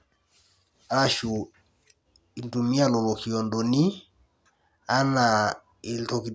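No technical faults are audible anywhere in the recording.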